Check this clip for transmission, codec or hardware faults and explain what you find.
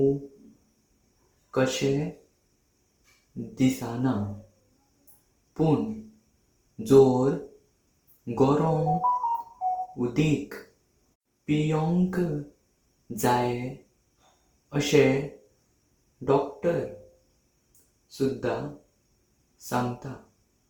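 One codec fault, Opus compression, runs through the whole clip. The speech sounds grainy and rough, with tonal parts turned noisy, though content reaches 20.1 kHz. That fits a fullband CELT-mode encoder likely short of bits near 24 kbps, filling bands with folded spectrum or noise.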